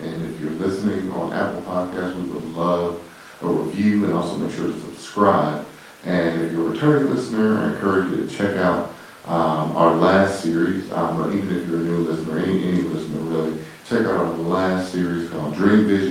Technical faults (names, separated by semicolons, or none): none